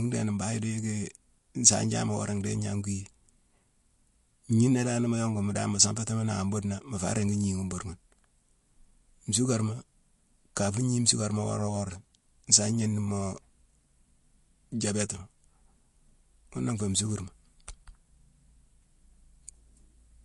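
From start to finish the speech carries plainly audible damage, likely from MP3 compression: nothing reaches above 11.2 kHz, and the s sounds turn watery and swirling as weak frequency lines drop in and out between frames. The degree of damage fits a low bitrate around 48 kbps. Unlike a simple low-pass filter, which would only dull the top, this cut comes with that shifting, chirpy texture.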